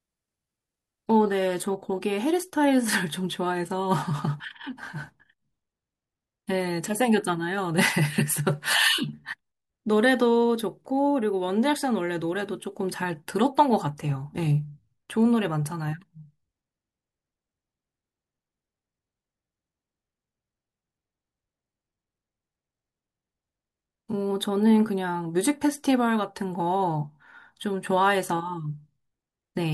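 Adaptive stream starting at a low bitrate, from 0.00 to 2.00 s: the speech opens thin and synthetic-sounding, with smeared treble that fits roughly a 16 kbit/s HE-AAC rendition, then snaps to full, clean detail without any gap, consistent with a step up to 96 kbit/s AAC-LC.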